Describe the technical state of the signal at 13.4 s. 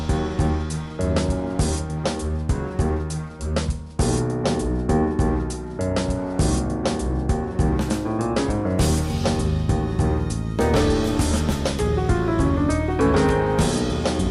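At 13.4 s the signal is intact, with no audible technical fault at that point.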